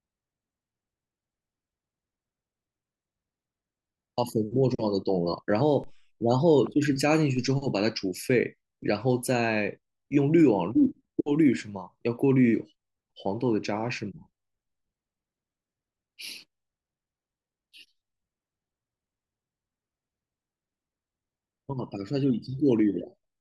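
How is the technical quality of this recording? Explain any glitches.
The recording has two DC steps, at 5.84 s and 7.37 s. At each one the waveform's zero line suddenly jumps by about −36 dBFS and then slides back as a 2 Hz high-pass drains the offset. You hear it as a low thump under the speech. Unlike a dropout, the speech itself carries on intact. Only the baseline shifts.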